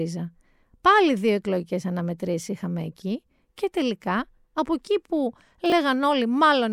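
At 5.66 s, just after "τελικά από εκεί που", the speech briefly jumbles until 5.72 s. This is chunks out of order. A 20 ms chunk arrived two chunks late. It plays after its successors, leaving three hard joins.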